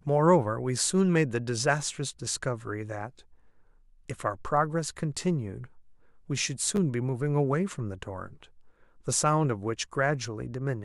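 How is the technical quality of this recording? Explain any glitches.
There is one audible glitch, a brief jumbled moment in the speech.

From 6.76 to 6.78 s, chunks play out of order. A 10 ms chunk arrived one chunk late and plays after the one that should follow it. Nothing is lost, but the swap creates three hard joins, heard as a tiny garble. The waveform shows abrupt steps at each join, and the spectrogram shows thin vertical broadband lines.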